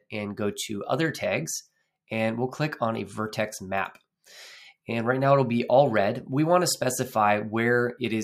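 Nothing technical stands out in this audio; there's no fault to point to anywhere in it.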